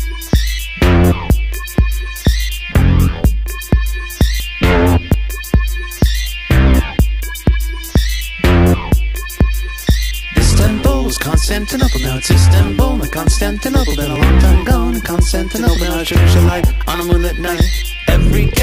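At 4.4 s and again at 5.14 s the sound skips forward, each jump losing around 70 ms; a smaller skip of about 20 ms follows at 14.16 s. This is likely a dropped buffer (overrun), with unread samples overwritten and the remaining audio joined directly.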